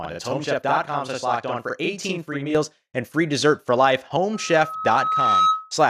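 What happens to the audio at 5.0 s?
Loudspeaker feedback squeal runs from 4.33 to 5.74 s, after "free dessert for life". The microphone picks up its own loudspeaker. A 1.3 kHz tone swells to about 5 dB above the speech.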